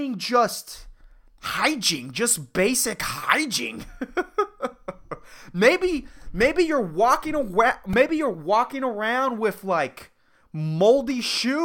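At 7.93 s, between "maybe you're walking away" and "you're walking around with", a repeated buffer occurs: playback ran short of new audio, so a 1.33 ms block, which fits a 64-sample buffer, played several extra times. It sounds like a brief click or buzz.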